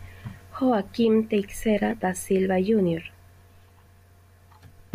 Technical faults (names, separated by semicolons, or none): audio missing between chunks